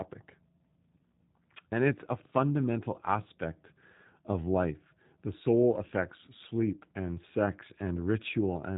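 From start to finish the speech carries G.729 codec damage, plainly audible. Nothing above 3.8 kHz survives, so the sound is dull. Each short frame is rebuilt from a filter model and a few pulses. This leaves a rough, synthetic edge, which fits an 8 kbit/s stream.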